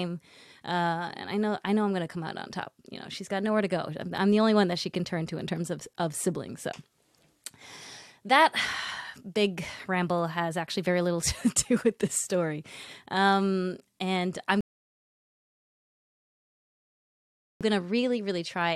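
At 14.61 s, right after "and I'm", the speech drops into a rebuffering stall: the player exhausted its downloaded audio and halted for 3 seconds, resuming at 17.61 s exactly where it paused. A waveform shows a flat gap, a spectrogram a blank band.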